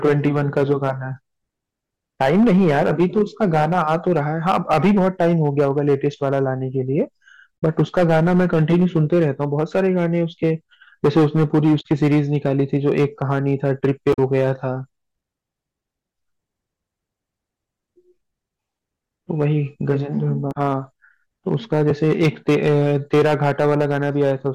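A harsh fuzz sits on every loud syllable of the speech throughout: hard clipping, with peaks driven about 11 dB past full scale and flattened on a few percent of samples. Short chirps and blips at 7.63 s, 11.80 to 11.86 s, 14.13 to 14.19 s and 20.51 to 20.57 s come from damaged data in a compressed stream, where the decoder misread frames and lost sync.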